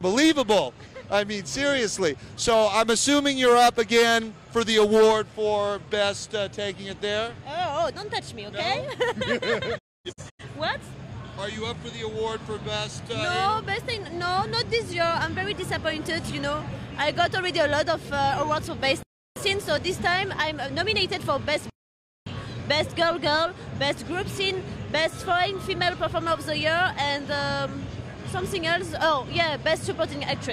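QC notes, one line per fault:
9.77–10.44 s, digital broadcast dropout: the receiver lost valid frames and muted, so the sound fades out within 20 ms into holes totalling 384 ms, the longest 256 ms, and that material is gone.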